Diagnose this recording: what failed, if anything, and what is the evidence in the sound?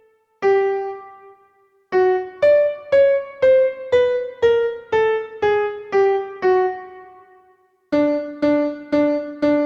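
Nothing in the recording points to a failure at any stage of the chain. No event in the sound calls for a diagnosis, so there is no evidence or mechanism to report.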